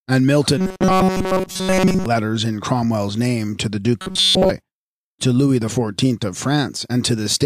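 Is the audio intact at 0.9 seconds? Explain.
No. From 0.58 to 2.06 s the audio has robotic sound from repeated short buffers, likely because new audio arrived too seldom and the playback repeated a chunk of about 5.3 ms while real audio was skipped. Throughout that stretch, the repeats impose a fixed 188 Hz buzz, turning speech metallic and rigid. A spectrogram shows flat, evenly spaced harmonic lines at multiples of 188 Hz; the waveform shows identical short cycles repeating.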